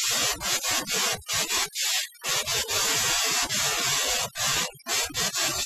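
Across the whole recording, the speech carries overdone noise removal. A denoiser set far too aggressively is cutting individual frequency bands whenever their level sits near its noise estimate, and softer parts of the speech are removed along with the background noise. The pauses drop to near silence scattered with twinkling specks. Unlike a noise gate, which cuts the whole signal at once, the removal here varies band by band.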